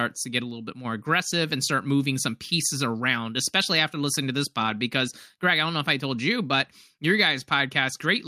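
Speech, with a resampler restarted on every block throughout. The converter, apparently going from 44.1 kHz to 48 kHz, treated each 20 ms block in isolation, so at each block edge it lacked the true neighbouring samples and left a small error. Those errors repeat at 50 Hz, and because the blocks are so short they merge into a low buzz riding under the speech, present only while sound is playing and gone in the pauses.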